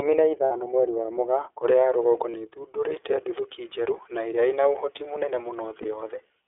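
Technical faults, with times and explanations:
Throughout: iLBC codec. The sound is confined to roughly 300 Hz to 3.5 kHz, with clearly audible coding roughness and a slightly synthetic edge. Each 30 ms block is coded on its own, which fits iLBC's 13.33 kbps mode.
0.45–0.51 s, 2.31–2.34 s and 5.82–5.86 s: lost iLBC frames. The first gap is about 60 ms, which fits two dropped frames. The others are about 30 ms each, one after "ya rũgongo" and before "nĩ ĩthundũrite nduthũki njerũ", and one after "ĩria ĩna ũhoti mũnene". The decoder fills each gap by repeating the last pitch cycle mixed with noise, so you hear a brief held, buzzy vowel. Because the frames are independent, the sound recovers right away.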